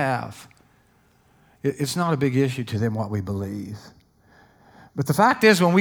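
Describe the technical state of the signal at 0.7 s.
At 0.7 s the speech signal is intact, with no audible technical fault at that moment.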